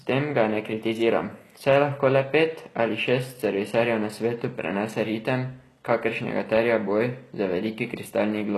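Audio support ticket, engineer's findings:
Speech, throughout: plainly audible codec damage. Treble sounds synthetic, with gritty, lispy s sounds and harmonics misaligned above the crossover. Nothing above 12.4 kHz. Likely HE-AAC compression: spectral band replication copies lower bands upward under a coarse envelope, consistent with roughly 16 kbps.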